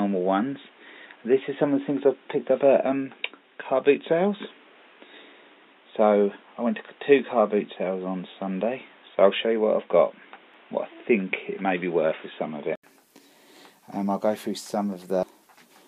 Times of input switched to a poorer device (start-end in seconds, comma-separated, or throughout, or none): 0.00-12.83